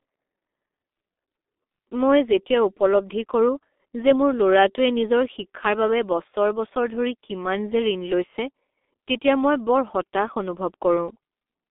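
Speech passed through the G.723.1 codec throughout, heavily damaged: it sounds muffled, hoarse and blurred in its consonants, which fits a coder running at about 6.3 kbit/s. On a spectrogram, energy sits in a telephone band of 250 Hz to 3.6 kHz, with a hard empty ceiling above 3.8 kHz.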